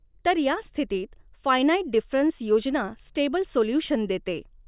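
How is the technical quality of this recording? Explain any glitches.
Nothing in the recording stood out as a technical problem on listening, so there are no glitches to explain.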